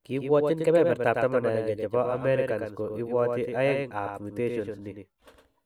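From start to end, the speech carries a doubled audio track. A second full-band copy trails the original by about a tenth of a second, only about 5 dB quieter. It has no decay or room tone. A slower capture path likely recorded the sound twice.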